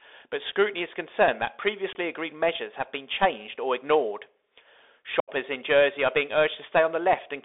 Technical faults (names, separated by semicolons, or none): Bluetooth CVSD headset codec; unconcealed Bluetooth headset packet loss